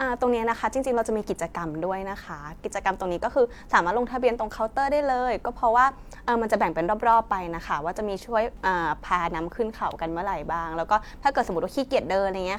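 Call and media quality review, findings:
No audible faults found in this speech recording.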